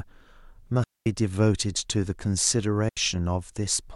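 At 0.84 s the speech cuts to near silence for about 225 ms, returning at 1.06 s. At 2.89 s a second gap of about 80 ms follows. Both are digital wireless dropouts. The receiver lost too much data and muted with a very short fade. Each hole is clean, with no noise burst on either side.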